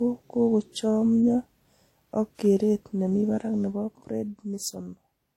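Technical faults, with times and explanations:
Throughout, transcoding between lossy codecs: the speech carries two layers of coding damage at once, the artefacts of both codecs heard together. This fits a likely chain of HE-AAC near 32 kbit/s re-encoded as WMA 1 near 64 kbit/s, with the second codec spending bits on the first one's artefacts. A spectrogram shows a hard ceiling at 16.2 kHz and blotchy, patchy high bands. The waveform looks unremarkable.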